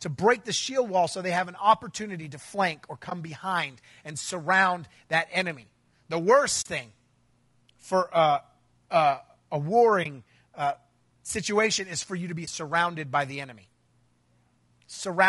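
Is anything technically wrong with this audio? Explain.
Yes. Throughout, the speech sounds rough and grainy, with noise between harmonics and a dulled, synthetic top band, likely from low-delay AAC compression (AAC-ELD), consistent with about 32 kbps.

AAC frame loss with muting occurs at 3.09 s (after "opportunity to flank or"), 6.61 s, 10.03 s (after "for uh uh a") and 12.45 s (after "for you to be"). Each is a soft dropout of about 20 to 40 ms where missing frames were replaced with silence.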